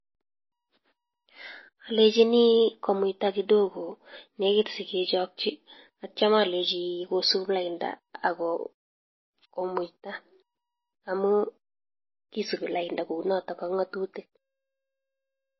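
From start to finish the speech carries plainly audible damage, likely from MP3 compression at a low bitrate, with the sound pointing to something around 24 kbps. Nothing survives above about 5.8 kHz, so s sounds are dull, and the encoder has evidently starved weaker frequency lines, letting them flicker between frames. That gives a watery, swirling texture with metallic chirps on sibilants and smeared onsets. A simple low-pass filter would cut the treble just as cleanly but leave no swirl.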